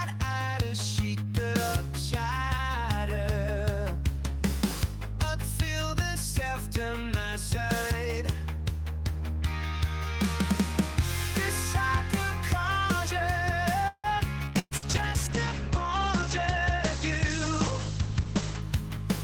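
From 13.87 to 14.07 s there is a call audio freeze: the last sound is held and fades, ending in about 60 ms of silence, and then the audio resumes with nothing lost. The likely cause is delayed packets draining the jitter buffer. Unlike packet loss, the stall only inserts a 164 ms gap.

At 14.46 to 14.50 s a skip ahead jumps forward with almost no gap, dropping about 70 ms of audio. This is an abrupt splice rather than a held, fading tail.

From 14.46 to 18.68 s a call bitrate drop from 48 to 11 kbps leaves the sound rough and muffled, with the bandwidth narrowed from 20 kHz to 8 kHz. This is a lasting coarseness that clears at 18.68 s, not a brief dropout.

Within that stretch, two bursts of packet loss occur, at 14.59 to 14.74 s and 14.77 to 14.85 s. Each holds and fades the last sound, and the first ends in about 40 ms of silence. About 120 ms and 60 ms of audio are then missing. That lost content is what separates these bursts from the freeze.

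Jitter buffer speed-ups run from 16.23 to 16.79 s at 110% speed, removing about 70 ms, and from 18.14 to 18.98 s at 105%, removing about 50 ms. The audio sounds hurried while the pitch stays the same, so it reads as compression in time rather than a jump.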